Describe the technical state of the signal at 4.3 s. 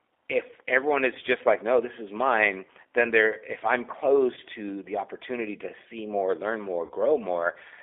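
Just after 4.3 s, from 4.34 to 4.40 s, the speech is briefly stretched into a drawn-out sound that sags in level and stays weak and distorted for a moment after clean audio returns. This is VoIP packet loss concealed by the speech codec. About 30 ms of audio went missing, which fits one lost packet, and the decoder filled the gap by extending its last pitch and vocal tract filter at falling gain. Because each frame builds on the previous one, recovery takes a little longer than the gap itself.

Underneath this, at 4.3 s as everywhere else, the sound is thin and plainly rough and synthetic, limited to roughly 300 Hz to 3.5 kHz. That is the G.729 codec, here the G.729A variant, at a rate consistent with 8 kbit/s. It rebuilds each 10 ms frame from a vocal tract filter, a pitch predictor and a few pulses, so it discards everything above about 4 kHz and gives the voiced sound its coarse texture.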